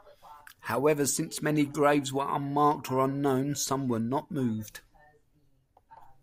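Nothing stood out as a technical problem on listening to this speech recording.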